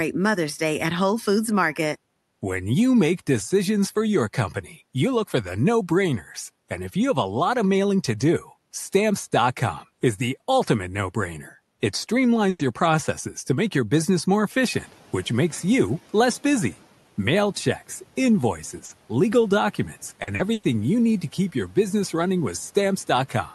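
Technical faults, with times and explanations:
12.49–12.62 s, burst of packet loss: just before "your processes to make", about 100 ms of audio never arrived in time. The receiver continued the last sound and faded it down, then resumed further on with that stretch missing. Unlike a brief concealed loss, this is long enough to hear as a gap.
12.59 s and 18.89 s, lost packet rebuilt from error correction: at each point a single 20 ms packet was lost, but the next packet carried a low-bitrate copy of it. The decoder played that copy, so nothing drops out and the sound briefly turns rougher and grainier.
14.72–14.98 s, noise suppressor catching up: the room noise jumps by about 14 dB at roughly 14.5 s. Between "make your business more" and "which makes you less" the suppressor's estimate lags, so the hiss swells and then sinks by about 7 dB over 260 ms. Nothing is lost from the speech itself.
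18.85–18.92 s, short concealed packet loss: about 40 ms failed to arrive and was filled by continuing the preceding sound, then blended back. This is heard as a quick smear or wobble rather than an audible hole, and it is far shorter than the burst at 12.5 s.
20.23–20.65 s, repeated packet loss (robotic sound): three separate holes, the longest 100 ms, totalling 180 ms or 43% of the stretch, were each patched by continuing the last sound. Because the holes arrive in quick succession, the sound turns choppy instead of producing a single smear.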